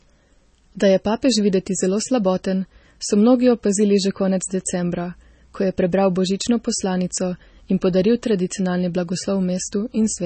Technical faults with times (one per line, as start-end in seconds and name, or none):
0.00-10.26 low-bitrate audio saved at a high bitrate